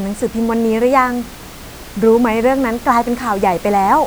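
Nothing stood out on listening, and the room noise that sits about 20 dB below the speech is simply part of the recording rather than a system fault.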